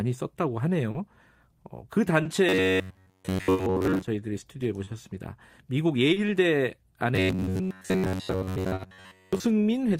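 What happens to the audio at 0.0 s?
From the very start the speech carries small, unevenly spaced timing hiccups, with short pieces briefly repeated, and these continue through the whole clip. This is clock drift between sender and receiver: the sender's clock runs roughly 2% slow, so the jitter buffer keeps draining and the receiver fills in by repeating audio.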